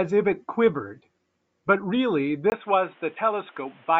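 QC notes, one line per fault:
2.5 s to end: input switched to a poorer device. A 20 ms silence at 2.5 s, then the speech turns dull and boxy, with nothing above 3.8 kHz and a faint new noise floor well beneath it, at much the same level. It is likely a swap to a narrowband microphone or headset call profile.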